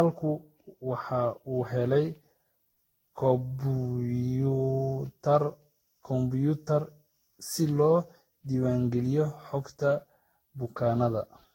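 Throughout the speech, the sound is swirly, smeared and hollow, and attacks blur. Nothing reaches above 16.7 kHz. This is likely generation loss: around fifteen lossy passes, pointing to Vorbis near 60 kbit/s. Each re-encode stacked new quantisation noise and spectral holes.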